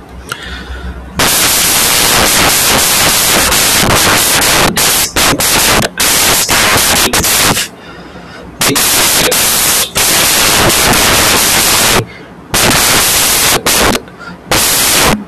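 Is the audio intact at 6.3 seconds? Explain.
No. At 6.3 seconds, as through the whole clip, the speech is buried under samples built from the wrong bytes. Each sample's bytes have been assembled in the wrong order or alignment, so the rapidly changing low-order bits end up as the most significant part of every value. The result is loud, harsh broadband noise, close to white on louder sounds and often a pitched buzz on softer ones.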